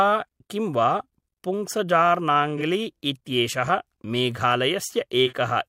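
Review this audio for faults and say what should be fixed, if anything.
Two short patches of AAC frame loss with concealment, at 2.57 to 2.62 s and at 5.26 to 5.33 s, need fixing. Each loses 42.7 ms of audio, which fits a single lost AAC frame. The decoder bridges it by reusing the previous good spectrum with scrambled phase, so the speech smears into a brief noisy, phasey blur. A plain dropout would instead go silent or click. Adding error protection or retransmission on the AAC stream would prevent these losses.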